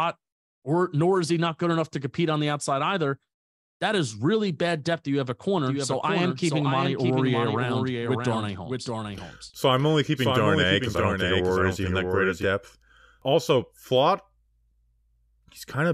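From 5.57 s, after "that you have a", to 12.45 s, a doubled audio track runs: a full-band copy of the speech trails roughly 0.7 s behind, about 5 dB quieter, likely captured twice or duplicated in an edit. Unlike echo, it has no decay or room colour and starts and stops abruptly.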